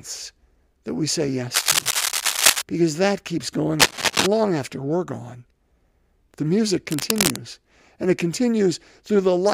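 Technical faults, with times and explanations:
1.54–2.62 s, 3.79–4.27 s and 6.90–7.38 s: cable scratch noise. Dense, uneven bursts of scratching and rustling sit over the speech. The first burst lasts about a second, and the other two about half a second each. Two bursts are roughly as loud as the speech, and the middle one is a little louder. The likely cause is a worn cable or connector being moved, with its contact resistance changing rapidly.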